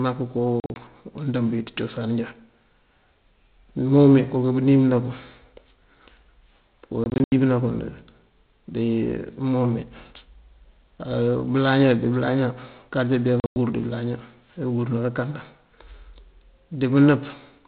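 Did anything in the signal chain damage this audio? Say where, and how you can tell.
Yes, the network stage. The speech drops into hard-edged holes at 0.6 to 0.76 s (before "undëëmb wí ţí"), 7.04 to 7.32 s and 13.4 to 13.56 s (before "dí bëlaña"). Gap lengths step in 20 ms units, which fits 20 ms packets lost and replaced with silence.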